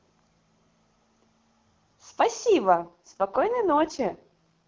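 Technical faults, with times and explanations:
2.76 to 4.67 s, AMR rate drop: the speech turns rougher and more synthetic partway through, with no gap and no narrowing of the band. That points to the network cutting the HD Voice link from about 23.85 down to roughly 6.6 kbit/s to protect a weakening connection.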